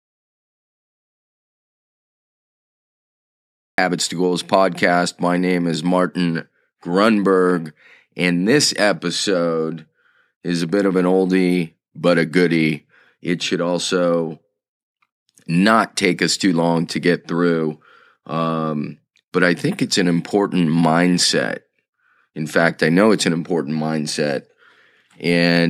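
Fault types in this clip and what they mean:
Audio dropout to silence: the speech is absent from the start until 3.78 s, as silence with no room tone, unlike a quiet pause; likely a lost input.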